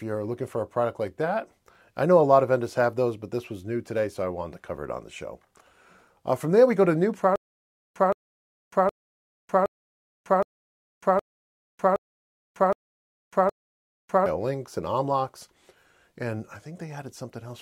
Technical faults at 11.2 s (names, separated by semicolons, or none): stutter with silent gaps